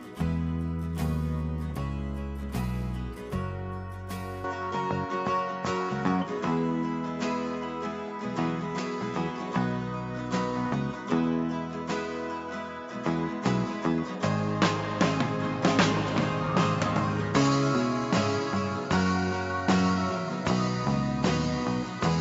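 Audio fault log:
4.44–22.21 s, input switched to a poorer device: right at 4.44 s the sound goes duller, with nothing above 7.6 kHz, a level shift of roughly 5 dB and a new noise floor somewhere around 35 dB down, all with no gap. Most likely the input jumped to another microphone.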